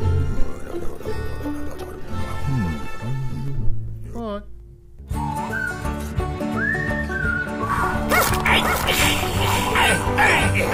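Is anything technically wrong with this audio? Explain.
Yes. From 7.70 s to the end, the audio has a doubled audio track. A second, full-band copy of the same material runs about half a second behind the original and about 5 dB quieter. It has no decay or room colouring. It cuts in abruptly at 7.70 s, so the material is heard again half a second later. The likely cause is the signal being captured a second time through a slower path, or an edit leaving two copies out of step.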